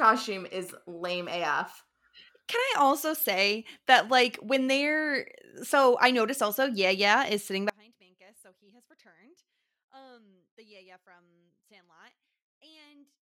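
The signal was likely lost at 7.7 s, after "yeah yeah is sitting": an audio dropout to a faint residue, leaving only faint sound to the end.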